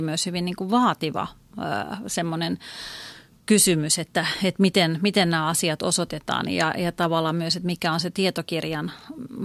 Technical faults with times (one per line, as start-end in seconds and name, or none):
none